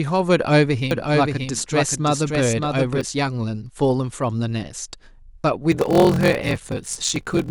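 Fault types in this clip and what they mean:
doubled audio track: 0.91 to 3.01 s, a dry full-band copy trails about half a second behind, roughly 5 dB down, likely captured twice by a slower path.
block size mismatch (padded): from 5.7 s, zero-filled gaps in each block, which fits 1024-sample reads, cause a 43.1 Hz buzz and slow the audio to 0.861 speed at near-normal pitch.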